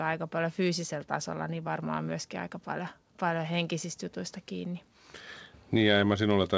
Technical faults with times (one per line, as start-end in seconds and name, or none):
none